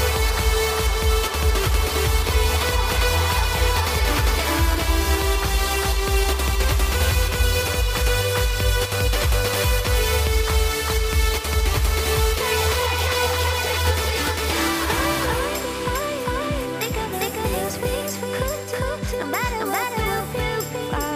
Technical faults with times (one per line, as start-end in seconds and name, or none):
0.00-21.15 doubled audio track